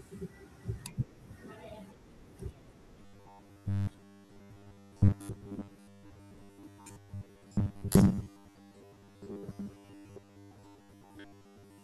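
From 3.02 s to 11.83 s the speech turns into robotic sound from repeated short buffers: a rigid, metallic buzz near 100 Hz that still loosely follows the speech. The likely cause is audio arriving too seldom, so playback loops the last 10 ms of sound to fill the gaps, repeating for around 70 percent of the span while the real material is skipped. A spectrogram would show evenly spaced harmonics at 100 Hz steps, and the waveform identical 10 ms cycles.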